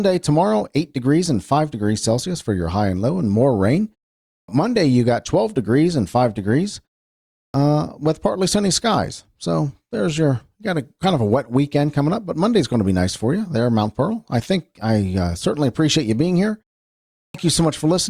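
At 4.40, 7.45 and 17.26 s you get a clipped start after a pause. Each time the speech has gone quiet for half a second or more (about 0.53, 0.66 and 0.71 s), the output device drops off and isn't back in time, so the first 84, 92 and 85 ms or so get swallowed. Right after "low and more rain", and just before "with partly sunny skies", the speech snaps in abruptly, missing its opening sounds.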